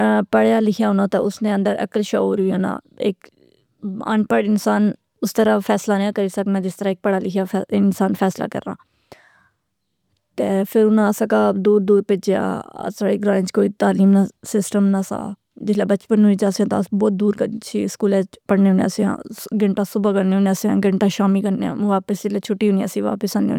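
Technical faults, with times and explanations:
No technical faults are audible anywhere in the speech signal.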